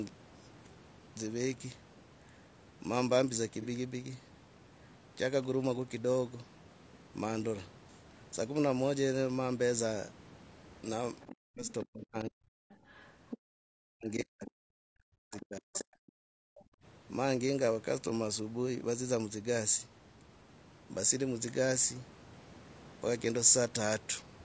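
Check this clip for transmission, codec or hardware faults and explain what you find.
Several faults are audible: codec coarseness throughout, two brief concealed frame losses, and echo-canceller trouble between 11 and 17 seconds.

Low-delay AAC compression throughout, likely AAC-ELD at around 32 kbps: short frames blur the harmonics, making the speech grainy, with noise filling gaps between harmonic lines on a spectrogram.

AAC frame loss with concealment at 3.62 and 11.99 s: one 30 ms frame each time was rebuilt from the previous spectrum. It sounds like a smeared, phasey blip and shows as a blurred vertical patch.

Other side's voice leaking through at 11.21–11.84, 12.70–13.38, 15.31–15.84 and 16.56–16.62 s, about 15 to 25 dB below the talker, is likely residual loudspeaker echo. It sounds like faint second-voice scraps and shows as weak, misaligned harmonic traces.

Speech suppressed in double talk at 11.33–12.53 and 13.73–15.92 s, roughly a second and two seconds respectively, likely happened because the canceller ducked both voices together. 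The talker dips by up to about 40 dB, showing as waveform troughs.

Background gated by the echo canceller at 13.38–13.45 and 16.20–16.83 s, about 32 and 36 dB deep: room sound drops out abruptly, leaving near-empty spectrogram gaps below the 8 kHz ceiling.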